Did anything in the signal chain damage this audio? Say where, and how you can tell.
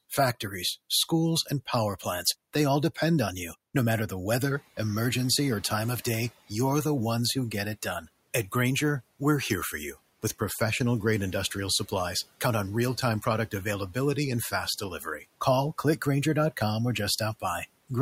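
Yes. Just after "product availability and fast", from 14.99 to 15.23 s, the speech turns faint and swallowed, dipping by up to about 8 dB. This is speech cut by the noise suppressor in call processing, which mistook quiet speech for background and attenuated it.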